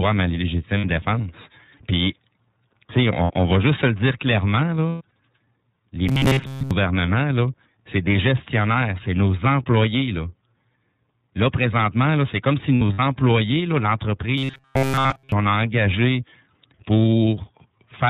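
Speech runs through the iLBC codec throughout, band-limited below 4 kHz, with a rough, synthetic edge consistent with its 30 ms frames at about 13.3 kbps. Lost iLBC frames occur at 0.78 s and 3.24 s, each about 60 ms, fitting two missing frames. Longer scattered losses of about 150 ms fall between 4.89 and 5.13 s and between 12.75 and 13.00 s. Each gap becomes a held, buzzy vowel, and the voice recovers almost at once. Robotic sound from repeated short buffers appears from 6.09 to 6.72 s and from 14.38 to 15.32 s. A rigid 134 Hz metallic buzz replaces most of the first stretch and all of the second. This is likely caused by a buffer of about 7.5 ms being replayed.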